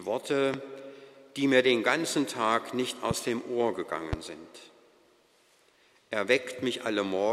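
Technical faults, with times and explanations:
0.54–0.56 s, 3.11–3.13 s and 4.13–4.15 s, loud pop: each is a single sharp pop peaking roughly 10 to 15 dB above the sound, which carries on underneath. A sudden voltage pulse, likely from a switch or static, is added to the signal.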